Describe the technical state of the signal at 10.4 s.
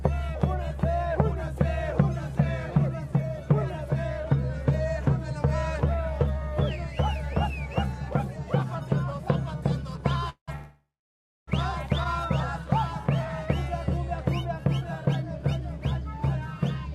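A call audio freeze runs from 10.29 to 10.50 s. The last sound is stretched into a fading buzz or hiss that drops to about 110 ms of silence, likely because delayed packets emptied the jitter buffer. Playback then resumes where it stopped, nothing lost, about 182 ms late.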